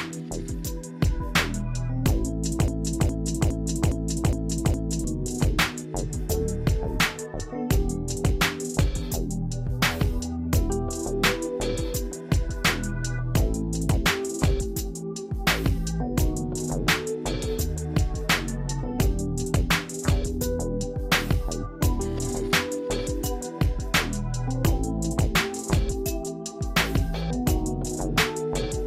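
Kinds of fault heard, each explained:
Broken-record loop: from 2.68 to 5.04 s, a fragment of about 0.41 s plays six times in a row, identical each time, and the sound meant for that span never arrives. The player, encoder or stream likely stalled and kept resending its last held piece.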